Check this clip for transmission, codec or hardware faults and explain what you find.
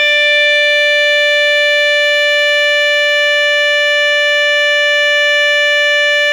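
One codec fault runs through the whole music clip: generation loss. Repeated lossy encoding, likely about seven AAC passes at what sounds like 96 kbit/s, requantised the audio on shifting frame grids each time. The accumulated noise and spectral holes make it swirly and hollow, blur attacks, and leave nothing above 18.8 kHz.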